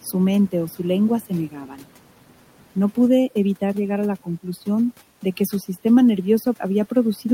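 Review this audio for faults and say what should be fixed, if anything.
The noise suppressor is cutting into the speech in three places. Right at the start, 0.01 to 0.14 s, just before "mente o", the level drops by about 11 dB. There's a second short dip at 1.21 to 1.31 s of about 12 dB, and a longer stretch from 1.49 to 2.76 s dips by about 13 dB across roughly 0.7 s of it. The suppressor is mistaking quiet speech for background and pulling it down with the room noise, so those bits sound swallowed. Relaxing the suppressor's threshold or giving it a slower release would stop it clamping down on soft speech.

From 3.09 s to the end there's overdone noise removal. The noise reduction is working so hard that individual frequency bands near its noise estimate get pushed right down or switched off. The background drops away and breaks up into little twinkling specks, and the quieter parts of the speech go with it. 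Backing off the reduction amount, and letting a bit of the room noise stay audible under the speech, would prevent this.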